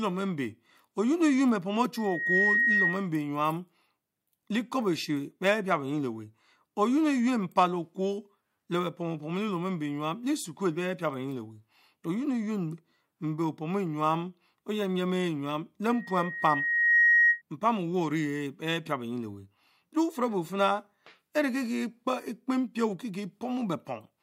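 From 1.95 to 3.08 s, loudspeaker feedback squeal: a 1.9 kHz tone swells within half a second to a few dB above the speech as the mic-to-speaker loop exceeds unity gain. It returns at 15.9–17.42 s, building over about a second, roughly 10 dB above the speech.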